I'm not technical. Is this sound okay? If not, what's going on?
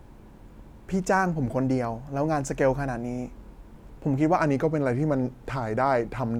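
No. From 0.0 to 4.37 s there is a wrong sample rate: speech plays about 1.09 times too fast and 1.5 semitones higher, which fits 44.1 kHz audio played back at 48 kHz.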